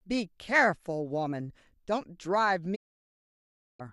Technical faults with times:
2.74-3.81 digital broadcast dropout

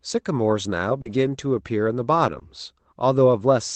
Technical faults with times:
1.01-1.07 short concealed packet loss
1.05-1.23 lost packet rebuilt from error correction
2.27-2.37 lost packet rebuilt from error correction
2.39-2.43 short concealed packet loss

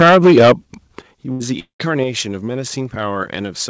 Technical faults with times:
0.00-0.52 microphone overload
0.02 microphone volume stepped down
1.02 microphone volume stepped down
1.32-1.43 burst of packet loss
1.60-1.82 long network dropout
2.04 microphone volume stepped down

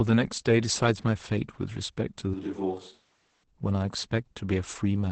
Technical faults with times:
0.00-5.12 Opus voice compression
2.34-3.43 switch to a distant microphone

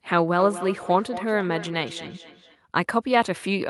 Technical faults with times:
0.39-2.59 feedback echo between two devices

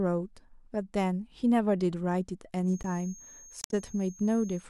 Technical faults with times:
2.60-4.69 feedback whistle
2.83 block of digital silence
3.61-3.73 damaged data in a compressed stream

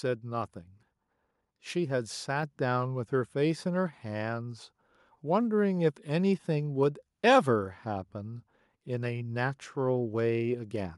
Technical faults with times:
2.43 microphone volume stepped up

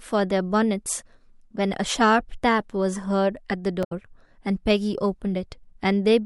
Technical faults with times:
3.83-3.92 damaged data in a compressed stream

